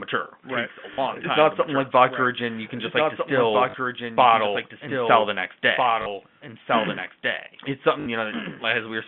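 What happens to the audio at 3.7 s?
Between 3.70 and 3.74 s, just after "can just like distill" and before "bottle and sell the", there is packet loss with the last packet repeated. About 40 ms went missing, which fits two 20 ms packets, and the last received packet was replayed to fill the gap. The result is a brief robotic stutter at a 50 Hz rate. A waveform shows one short block copied back-to-back, and a spectrogram shows a frozen slice.

Under this, as throughout the clip, runs a doubled audio track: a quieter copy trailing by roughly 1.5 s. It is likely from a second, slower capture path or a misaligned edit. On a spectrogram, the same pattern reappears about 1.5 s later.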